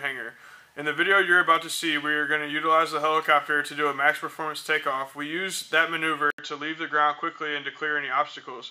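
Input switched to a poorer device, at 6.30 s and lasting to the end: after a gap of 80 ms the sound comes back duller, with nothing above 7.2 kHz, while the level stays roughly the same. A new background noise sits about 50 dB below the signal. The likely cause is the system changing its input mid-recording to another microphone or a headset's call profile, a device that passes a narrower band and carries its own noise.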